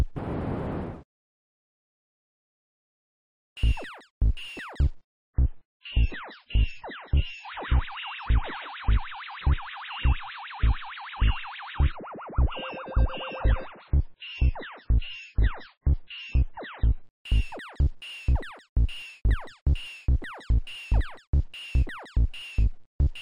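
Adaptive stream at a lower bitrate, 5.03 to 17.03 s: a sudden switch to a leaner encode removes everything above 6.8 kHz and thickens artefacts.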